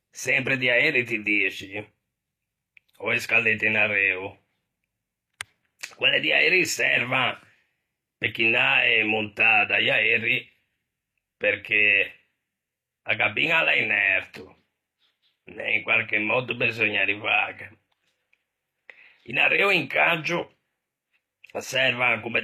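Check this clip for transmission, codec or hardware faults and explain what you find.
One codec fault runs through the whole clip. From start to finish, s sounds come out gritty and lispy, and nothing is audible above about 14.9 kHz. This is likely HE-AAC compression, with spectral band replication rebuilding the treble from copied lower bands whose harmonics don't align across the crossover. The plainly audible damage points to a low bitrate around 24 kbps.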